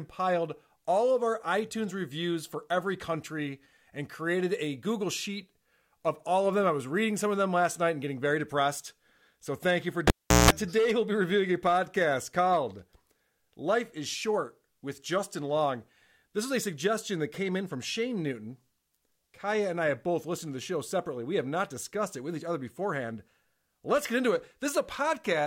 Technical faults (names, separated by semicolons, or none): cable pulled and plugged in